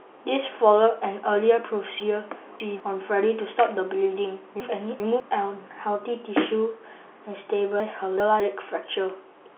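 At 2.0 to 2.8 s, 4.6 to 5.2 s and 7.8 to 8.4 s the speech jumbles briefly: chunks out of order. A 200 ms chunk plays late, three chunks behind in the first case and two in the others, so each span has three hard joins. Unlike a dropout or a repeat, nothing goes missing or doubles; the audio is just reshuffled. It all sits within the narrow telephone band of the G.711 line.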